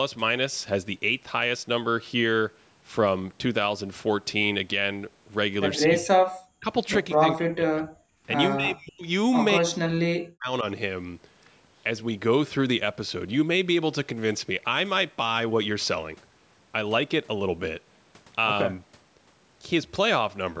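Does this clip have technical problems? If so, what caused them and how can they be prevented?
Yes. Between 5.85 and 10.65 s the speech repeatedly dips or drops out: 5.85–6.21 s, 6.6 s, 7.17–8.04 s, 8.56–9.05 s and 9.58–10.65 s, with the deepest cuts around 35 to 40 dB. This is likely speech suppressed in double talk, where the echo canceller mistook overlapping near-end speech for loudspeaker echo and attenuated it. Better double-talk detection, a headset, or lower loudspeaker volume would prevent it.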